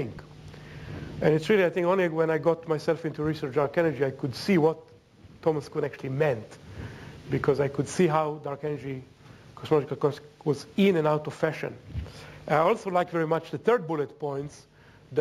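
Throughout the clip, imaging from linear upsampling dulls the top of the band and adds a faint metallic shimmer. The conversion joined samples with straight lines, consistent with a 16 kHz source, so on a spectrogram a weak mirrored copy spans 8 to 16 kHz, roughly 35 dB down.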